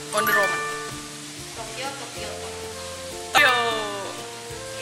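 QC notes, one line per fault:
0.87–0.90 s and 3.35–3.38 s, damaged data in a compressed stream: two brief bursts of roughly 33 ms each. Corrupted bytes in the encoded stream make the decoder misread those frames and lose sync until it finds the next valid frame header. A plain dropout would leave a gap, and a bad splice would give a single sharp click, but this fault comes from the decoder losing its place in the stream.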